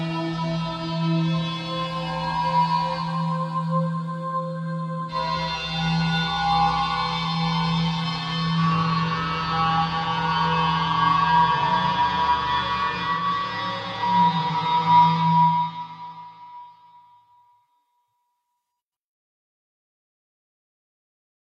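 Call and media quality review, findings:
Nothing to flag on this one; the audio holds up fine the whole way and there's no fault worth opening a ticket for.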